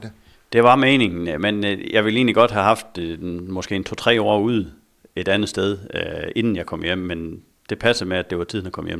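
Nothing in the speech stood out as a technical problem on listening.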